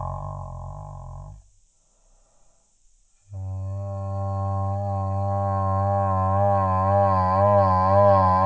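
From start to finish the music crawls along at about 0.36 times normal speed and sits roughly 17.6 semitones low, a classic wrong sample rate. Speed and pitch drop together, which fits 44.1 kHz material being played back at 16 kHz without conversion.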